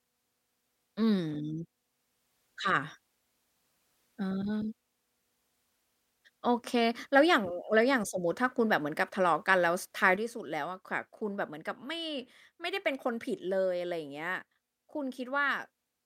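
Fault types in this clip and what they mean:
Sudden gain jump: The digital gain was likely changed between one sample and the next with no ramp, such as a setting or one-bit shift applied instantly. At 10.16 s the speech drops by about 6 dB, roughly half its amplitude, and the background noise falls with it in the same instant, so the whole sound steps down in level at once and stays at that lower level through to the end of the clip.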